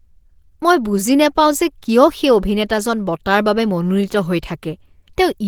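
From start to end the speech carries plainly audible Opus compression damage: a grainy, hoarse, muffled sound. A spectrogram shows content up to 20.1 kHz, with smeared, noise-like texture filling the upper bands. This likely comes from Opus hybrid mode at around 16 kbps.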